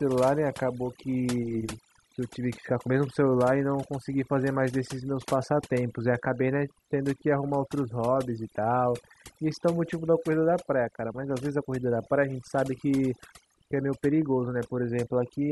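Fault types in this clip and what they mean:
Overdone noise removal: the denoiser was pushed too hard, so any frequency band sitting near its noise estimate gets slammed down or cut, taking quiet bits of the speech with it. Across the whole clip the background drops and breaks up into twinkly specks.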